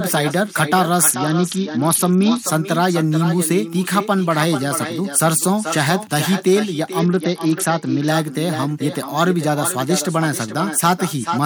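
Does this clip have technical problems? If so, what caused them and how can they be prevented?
Yes. An echo with no canceller runs throughout: the speech is shadowed by a copy about 10 dB quieter arriving roughly 0.4 s later, from the far loudspeaker feeding its microphone. Enabling acoustic echo cancellation or using a headset prevents it.

A Bluetooth SBC bit pool drop occurs at 1.09–2.39 s and 6.99–8.08 s. The treble dulls and grit rises, which fits the bit pool falling from 28 to 8 on a congested link. Reducing radio congestion and keeping the phone near the headset prevents it.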